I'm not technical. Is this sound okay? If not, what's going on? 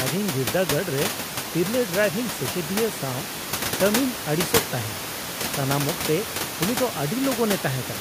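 Yes, nothing stood out as a problem when listening to this speech; the background noise of the room is simply part of the recording.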